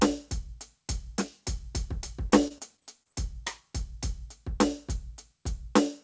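Repeated packet loss (robotic sound) runs from 2.30 to 3.07 s: six short gaps, the longest 24 ms, are patched by stretching the preceding music, so about 15% of that stretch is concealed, giving a choppy flutter over band-limited audio that stops at 8 kHz.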